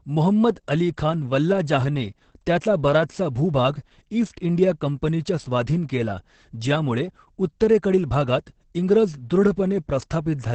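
From start to finish this speech has Opus voice compression damage. Nothing above 8.6 kHz, plus a hoarse, slightly robotic SILK sound that points to roughly 10 kbps.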